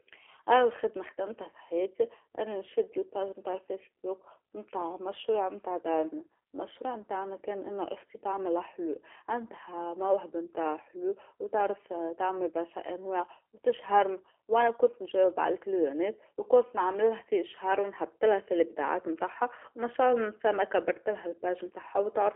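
Speech, carried throughout by the G.729 codec, most likely the G.729A variant at 8 kbit/s, judging by the sound. Each 10 ms frame is rebuilt from a vocal tract filter, a pitch predictor and a few pulses, so the speech comes out rough and synthetic, with plainly audible coding damage. A spectrogram shows telephone-band energy from about 300 Hz to 3.4 kHz and an empty region above 3.6 kHz. The waveform looks smoothed and lacks sharp transient detail.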